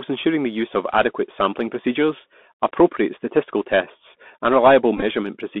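Throughout the speech, the Bluetooth CVSD headset codec sets the sound. The band runs from about 200 Hz to 3.5 kHz, which fits a 64 kbps CVSD link. Each sample is coded as a single up-or-down bit with an adapting step. Sibilants come out scratchy and a granular hiss sits under the speech. Louder, brighter passages outrun the step size and smear into distortion.

From 4.97 to 5.03 s comes a Bluetooth headset packet repeated episode. About 41 ms of audio was lost in scattered gaps across roughly 52 ms, consistent with around eleven lost packets. The decoder re-decoded the previous packet's bits in place of each missing one. The longest unbroken run, around 15 ms, repeats every 3.75 ms and gives a short buzz near 267 Hz before normal packets resume.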